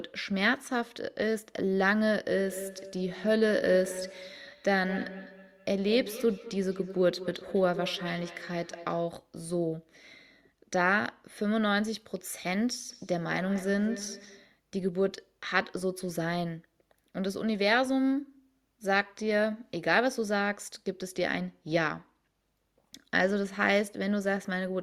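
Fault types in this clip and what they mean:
Feedback echo between two devices: Two devices in the same room are on one call. One plays back what the other's microphone sent, and that microphone picks it up again. Each echo canceller removes only its own device's output, so the loop survives. Here the speech comes round again about every fifth of a second, from 2.36 to 9.07 s and from 12.89 to 14.53 s. The repeats peak at about 12 dB and about 14 dB below the speech.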